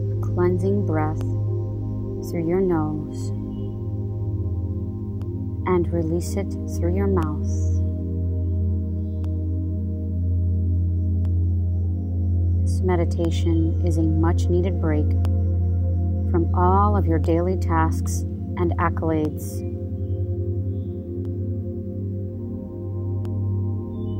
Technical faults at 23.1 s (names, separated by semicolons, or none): periodic USB or driver dropouts